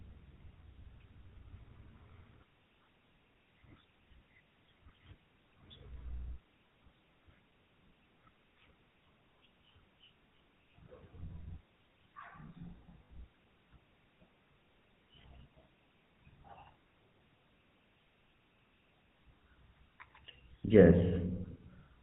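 GSM full-rate codec damage runs through the whole speech clip. The codec models the vocal tract as a filter and excites it with a sparse, regularly spaced pulse train, so fine detail in the excitation is thrown away and nothing above 4 kHz survives. The result is a plainly audible buzzy, gravelly roughness over every stretch of speech, with a dull, narrowband top end, consistent with the 13 kbps full-rate mode.

Lost GSM frames occur from 13.05 to 13.11 s, a gap of 60 ms that points to three consecutive frames going missing, and again from 15.22 to 15.24 s, about 20 ms, consistent with a single lost frame. Each time, the decoder fills the hole by reusing the last good frame's parameters. The sound is briefly frozen into a rough, metallic ring, longer at 13.05 s.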